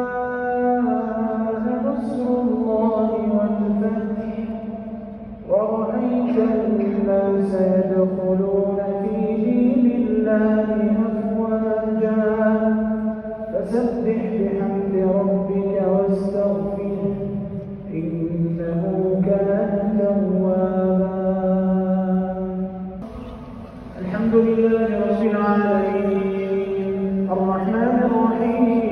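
Nothing technically wrong turns up anywhere in this audio, so there's no fault to point to and no cause to chase.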